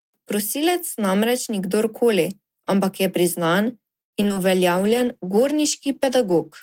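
From 4.01 to 4.45 s the speech turns choppy and robotic, with pieces dropping out. This is repeated packet loss: four gaps in quick succession, the longest 114 ms, each patched by stretching the preceding sound, so nearly half that stretch is concealment.

From 4.77 s to the end the speech sounds rough and duller, its top end capped near 12 kHz instead of 20 kHz. This is a call bitrate drop: the encoder coded far more coarsely and trimmed the highs, which fits a fall from about 32 to 14 kbps.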